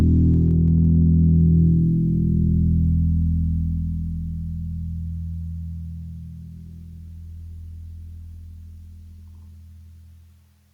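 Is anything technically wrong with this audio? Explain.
Yes, there is gain pumping throughout: input gain likely set far too high, with a fast limiter clamping each loud sound, so the level swings by around 5 dB, squashing the dynamics.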